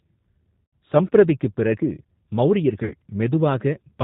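From start to finish the speech carries plainly audible G.729 codec damage, consistent with 8 kbit/s G.729A. The voice is rebuilt from a filter, pitch predictor and sparse pulses, so it sounds rough and slightly synthetic. A spectrogram shows an empty band above 4 kHz throughout.

At 0.65 to 0.73 s, VoIP packet loss concealed by the speech codec replaces about 80 ms of audio, which fits four lost 20 ms packets. The decoder repeats its last pitch and filter at falling gain, giving a buzzy tone or coloured noise that fades. On a spectrogram the harmonics run flat and dim, and the waveform envelope decays before recovering weakly.

At 2.84 to 2.94 s the same concealment covers about 60 ms, likely three packets. It produces the same stretched buzz or coloured noise with a fading amplitude. The flattened harmonic stripes and the shrinking waveform persist briefly after real audio resumes.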